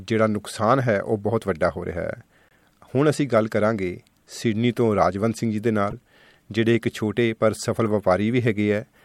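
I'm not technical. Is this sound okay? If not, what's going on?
No. There are three short glitches called corrupt frame decoded. They happen at 2.49 to 2.53 seconds, 5.90 to 5.93 seconds, and 7.86 to 7.92 seconds. Each one is a quick chirp or blip. The first is faint. The other two are much louder. The audio was stored in small compressed chunks. A few chunks got damaged, but the player played them anyway. That put sound in the wrong places for a split second.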